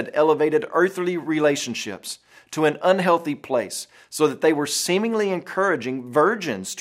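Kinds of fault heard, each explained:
No faults were detected.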